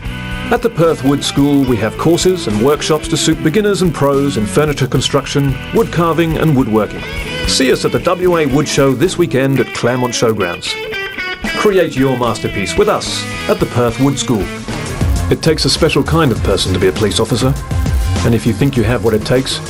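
From start to finish, the audio carries a resampler restarted on every block. The rate conversion, which fits a doubling from 24 kHz to 48 kHz, was done on each 10 ms block in isolation, so every block edge is computed without its true neighbouring samples and picks up a small error. Those errors repeat at 100 Hz and fuse into a buzz. Unlike mains hum, the buzz vanishes in silent passages and only rides on the signal.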